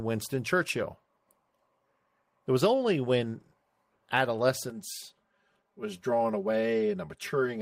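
Speech turns hollow and phasey from 4.70 s to the end at 7.62 s: channel delay (comb filtering), one channel lagging around 5 ms, notching from near 100 Hz, fixed rather than sweeping like flanging.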